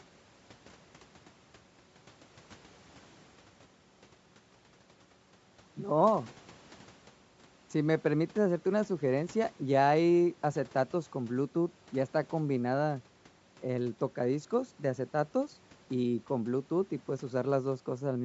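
From start to finish the speech carries a breathy, grainy sheen, with upper consonants smeared into a fizzy hiss rather than crisp detail. The damage is plainly audible and is likely from Bluetooth LC3 compression: the codec discards much of the upper spectrum and fills the gaps with shaped noise. The texture points to a moderate rate of around 48 kbps and 10 ms frames. The call microphone processing leaves nothing above 8 kHz.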